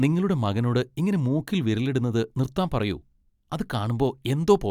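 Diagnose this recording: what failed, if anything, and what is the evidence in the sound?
Nothing failed; no faults found.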